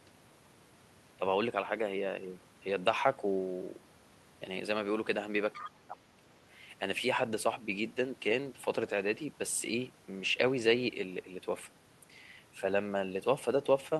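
Right around 5.55 s the speech suddenly sinks, dropping by something like 25 dB at its deepest, and stays pulled down until about 6.07 s, so roughly half a second is swallowed before the level springs back. That's the signature of speech suppressed in double talk. The likely cause is the echo canceller catching both ends talking at once, failing to tell this talker from the loudspeaker echo, and ducking everything to be safe.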